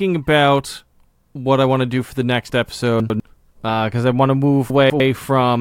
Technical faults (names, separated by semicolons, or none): chunks out of order